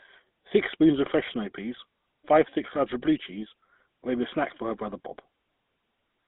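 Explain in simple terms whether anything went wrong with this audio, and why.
Across the whole clip the speech sounds buzzy, gravelly and thin, like an old mobile call. That is the GSM full-rate codec: it rebuilds the voice from a rough pulse pattern and keeps only about 200 Hz to 3.7 kHz, so the brightness and smoothness are lost.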